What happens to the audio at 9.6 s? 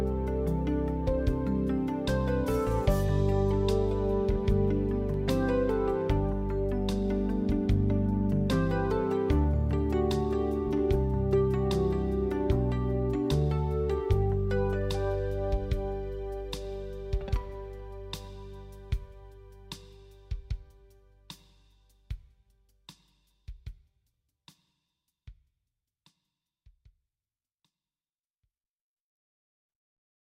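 Nothing goes wrong at 9.6 s; the audio continues through that moment without any dropout, click, distortion or other fault.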